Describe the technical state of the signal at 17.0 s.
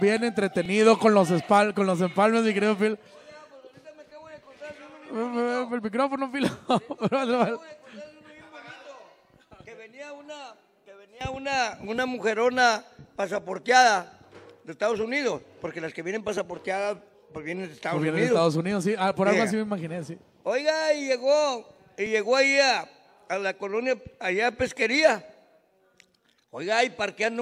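At 17.0 s the signal is intact, with no audible fault at that moment.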